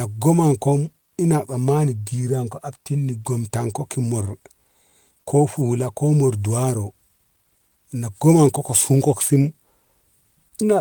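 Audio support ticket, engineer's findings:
Low bit depth without dither, throughout. Grainy, signal-following distortion, worst on quiet syllable tails and decays. Likely cause: 10-bit rounding with no dither, error floor about 50 dB below signal. Spectrogram: broadband haze that tracks the speech and vanishes in pauses. Waveform: visible stair-stepping at low levels.

Clock drift between sender and receiver, throughout. Sender clock running slow by roughly 1.5%, so the jitter buffer keeps draining and the receiver repeats short pieces to cover it. Heard as small recurring timing hiccups at uneven intervals. Spectrogram: brief vertical seams and duplicated slivers, irregularly spaced.

Repeated timing corrections, 0.70 s to 10.51 s. Receiver-side stretching, effective playback at 99% speed, inserting roughly 150 ms in total through small repeated segments. Heard as slightly uneven tempo with faint stutters. 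Waveform: short copied chunks with splice discontinuities at unevenly spaced points.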